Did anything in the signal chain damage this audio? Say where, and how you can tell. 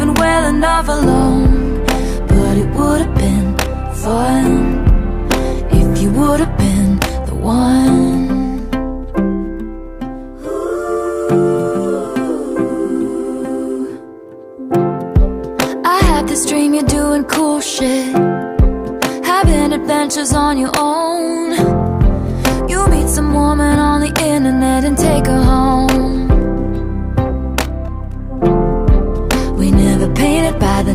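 No, nothing in the chain audibly damaged this audio. No stage from capture through to playback leaves a mark on the sound that can be pointed to.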